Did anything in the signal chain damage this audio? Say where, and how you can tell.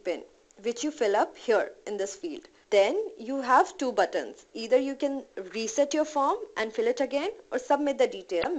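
Yes, right at the end. At 8.40 to 8.46 s there's a brief glitch, which is damaged data in a compressed stream. Some bytes in the file went bad, so the decoder misread those frames and lost sync until it found the next valid header.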